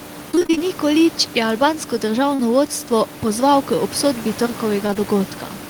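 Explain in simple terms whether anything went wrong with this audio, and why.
Between 0.31 and 0.69 s, the connection kept dropping small pieces of the call: eight gaps, none longer than about 21 ms, with nearly half that stretch patched over. This repeated packet loss makes the sound choppy and robotic there, with bits missing.

Later, short concealed packet loss occurs at about 2.35 s, losing roughly 40 ms, and again from 4.87 to 4.97 s as three quick back-to-back losses. The receiver filled each hole by stretching the preceding sound, which causes a brief smear or wobble.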